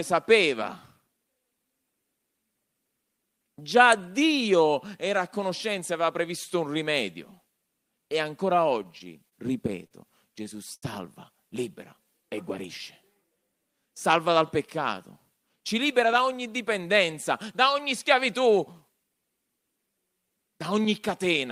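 From 8.83 to 10.84 s the speech hitches in repeated stalls (stutter). Packets came in late or too slowly, so the jitter buffer ran dry seven times, and each time the receiver stretched the last sound to cover the wait, 188 ms in all, the longest gap 80 ms. Nothing is lost, but the delivery drags and catches. On a spectrogram, short smeared stretches of repeated harmonics interrupt the normal flow. The waveform shows them as looped, sometimes decaying, segments.

Between 14.28 and 16.21 s, just before "ogni dipendenza da ogni", a jitter buffer speed-up takes over. The buffer held more audio than it targets, so the receiver trimmed away small pitch-period chunks, about a tenth of a second in total, making playback run at 105% with unchanged pitch. It sounds slightly hurried. The spectrogram shows harmonics at their usual spacing but syllables packed closer, and the waveform has tiny splice points between periods.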